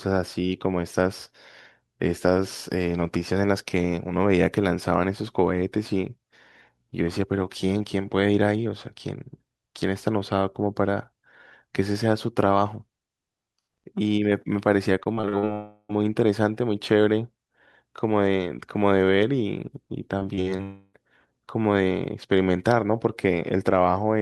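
From 15.03 to 15.45 s the speech breaks up with repeated packet loss, giving a robotic sound. Five short holes, the longest about 40 ms, are each patched by extending the preceding sound, so roughly a third of that stretch is synthetic fill. It sounds choppy, with fragments of speech missing. Right after, from 15.53 to 15.91 s, about 360 ms of audio disappears. It is replaced by a buzzy continuation of the last sound that decays into about 50 ms of silence before speech resumes with that portion gone. This is likely a long network dropout.

The pattern repeats at 20.19 to 20.61 s, where four gaps, the longest about 54 ms, are concealed across roughly 28 percent of the span and produce the same choppy, robotic texture. It is followed from 20.63 to 20.95 s by what is likely a similar dropout. About 300 ms is lost and filled by a fading smear of the previous sound, with about 20 ms of silence before the audio returns.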